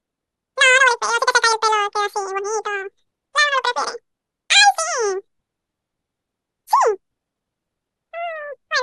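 From start to finish the speech plays at twice its proper speed and a full octave, 12 semitones, too high. This is audio read two samples at a time (double speed): pairs of samples were taken as single frames.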